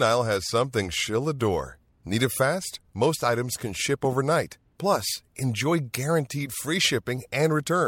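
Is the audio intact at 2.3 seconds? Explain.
Yes, the audio is intact at 2.3 seconds, with no dropout, click, distortion or other technical fault at that point.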